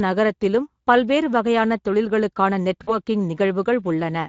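Throughout the recording the speech has a grainy, hoarse texture. That is the Speex codec, a CELP coder that models the voice as a filter driven by a coded excitation. At a rate that fits roughly 16.8 kbps, the excitation is coded coarsely, so the fine structure of the voice is replaced by rough, noisy approximations. The resulting damage is plainly audible.

From 2.83 to 2.96 s the voice briefly smears into a stretched sound that sags in level, then takes a moment to sound normal again. This is VoIP packet loss concealed by the speech codec. About 40 ms of audio went missing, and the decoder filled the gap by repeating its last pitch and filter settings at falling gain. Because each frame builds on the previous one, the distortion lingers after real audio resumes.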